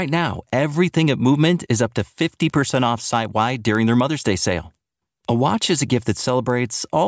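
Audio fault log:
throughout: resampler restarted on every block. The speech was converted in separate 250 ms blocks during a 48 kHz to 16 kHz conversion, so each block edge lacked its true neighbouring samples and carries a small error, heard as regular ticks at 4 Hz.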